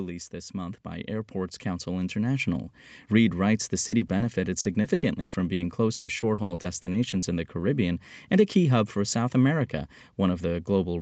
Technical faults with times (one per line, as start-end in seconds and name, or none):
0.30-2.80 automatic gain rising
3.87-7.28 repeated packet loss (robotic sound)